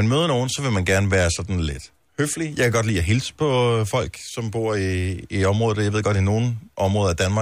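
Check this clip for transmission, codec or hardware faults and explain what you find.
Nothing stood out on listening to this speech clip.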